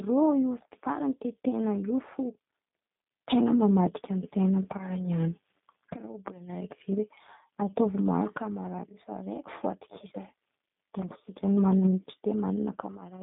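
Speech, carrying G.729 codec damage throughout: the band runs only from 150 Hz to 3.7 kHz, and the pulse-based reconstruction leaves a plainly rough, synthetic texture consistent with 8 kbit/s G.729A.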